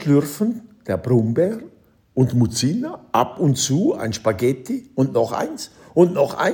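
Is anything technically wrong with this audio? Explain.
Yes. From 1.45 s to 3.32 s the sound drops about 6.2% in speed and about 111 cents in pitch, slightly more than a semitone, then snaps back to normal. This is likely a drift correction step, where clock-matching software abruptly slowed playback to let its buffer refill. Tape wow or flutter wavers continuously, but here speed and pitch shift together in one clean step down, hold steady, and return in one step.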